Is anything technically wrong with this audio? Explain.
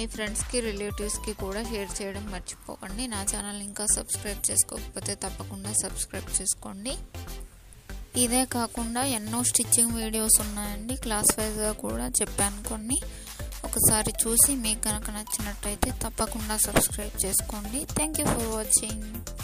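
Yes. From 2.53 s to the end, pre-emphasis is left on. The treble was boosted with a 50 µs FM curve, and the matching de-emphasis was never applied. Highs sit about 11 dB above 1 kHz at 10 kHz. The sound turns thin, bright and sibilant.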